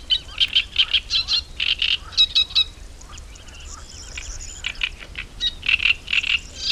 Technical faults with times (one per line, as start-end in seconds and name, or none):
0.48 electrical switching spike